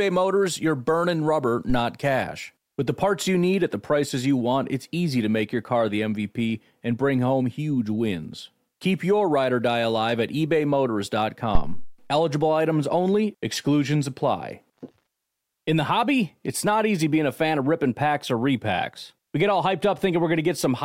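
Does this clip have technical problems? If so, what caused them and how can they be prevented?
Yes, there's a phantom power thump in this speech clip, running from 11.55 to 12.03 s. It's a deep, low thud that peaks at about -7 dBFS and dies away fast, with a decay of roughly 108 ms. What's happening is that a supply got switched on or off while the input was live, and that sudden DC step pushed straight through the coupling capacitors before they settled. To prevent it, mute the channel or pull the fader down before toggling phantom power, and only bring it back up once things have settled.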